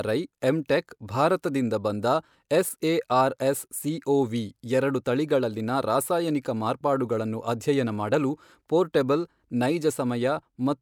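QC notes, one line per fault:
No audible faults found in this speech clip.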